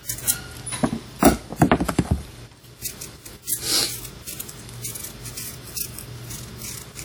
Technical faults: WMA compression

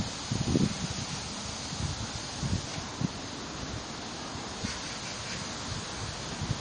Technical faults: MP3 compression

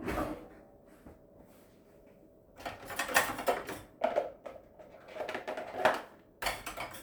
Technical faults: none

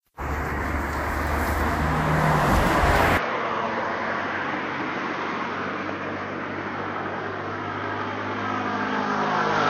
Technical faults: input switched to a poorer device

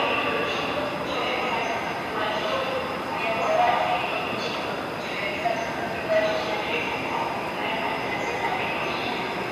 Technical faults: none

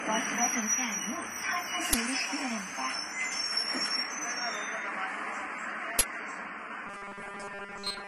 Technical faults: AAC compression; uninitialised buffer; robotic sound from repeated short buffers

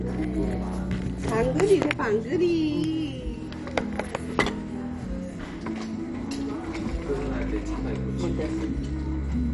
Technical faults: MP2 compression

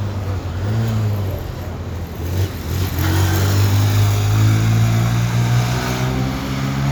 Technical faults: none

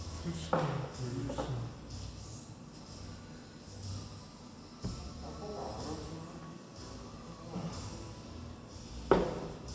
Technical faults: wrong sample rate

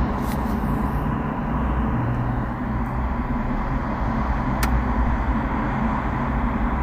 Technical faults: phantom power thump

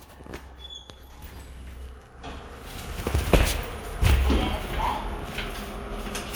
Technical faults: periodic USB or driver dropouts

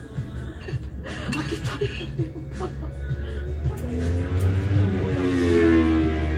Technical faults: none

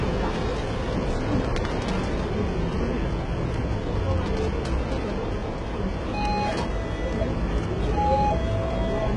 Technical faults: HE-AAC compression

